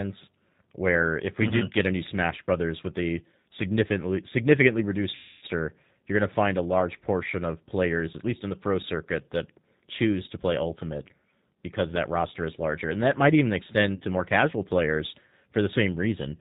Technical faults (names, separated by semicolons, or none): G.729 codec; VoIP packet loss concealed by the speech codec